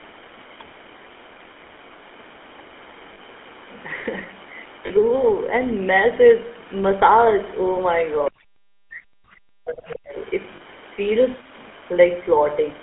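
Speech coded with the GSM full-rate codec runs through the whole clip, and it is confined to about 250 Hz to 3.4 kHz. Its buzzy, gravelly roughness fits the old 13 kbps full-rate coder rather than a modern wideband one, whose artefacts are smoother and whose band is wider. Lost GSM frames occur at 3.14 s, 4.86 s and 10.56 s. Each is a brief metallic ring lasting about 40 ms, which fits two dropped 20 ms frames. The ring comes from the decoder repeating the last good frame, so the sound is held rather than going silent the way a plain dropout would. From 8.3 s to 10.16 s the speech sinks very deeply, which is likely speech suppressed in double talk by the echo canceller. That gating across two seconds distinguishes it from the short, ringing frame losses.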